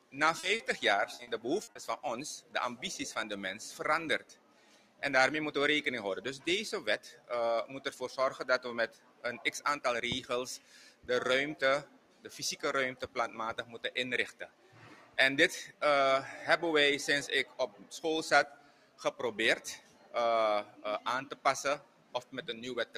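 Two short concealed packet losses come first, at 0.39 to 0.46 s and again at 0.55 to 0.62 s. Each time about 40 ms of audio failed to arrive, and the receiver patched the hole by extending the preceding sound before crossfading back. Each one is heard as a brief smear or wobble. On a spectrogram each appears as a narrow strip where the texture goes unnaturally smooth or copies the frame before it. The waveform shows a short section that looks repeated rather than continuing naturally.

From 1.15 to 1.78 s the losses become repeated packet loss, giving a robotic sound. Four separate 40 ms gaps fall inside roughly 0.6 s, so about a quarter of that stretch is synthesized fill. Because the patches come so close together, the sound turns choppy and robotic, with fragments missing. A spectrogram shows a stuttering run of flattened, copied-looking blocks separated by real content. The waveform looks chopped, with its envelope repeatedly held and then released.

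Across the whole clip, a noise suppressor designed for speech is acting on music or sounds. It treats sustained tones, ambience and reverb as noise, and its attenuation swings by around 10 dB. Attacks pass through while held material sinks, so the level pumps and the tails thin out. On a spectrogram, onsets stay bright while sustained partials and decays fade unevenly. The waveform envelope breathes without following the dynamics of the sound itself.

That suppressor also produces distinct passages of sound cut by the noise suppressor. These fall at 4.19 to 5.02 s, 6.39 to 7.3 s, 8.88 to 9.47 s, 10.58 to 15.82 s, and from 17.45 s to the end. In each passage, steady or decaying sound is pushed down by as much as about 11 dB, and reverberant tails stop short. The stretch from 10.58 to 15.82 s is affected for around two seconds in total. In those spans the spectrogram shows darkened sustained energy and truncated tails, and the waveform shows collapsed envelopes after each attack.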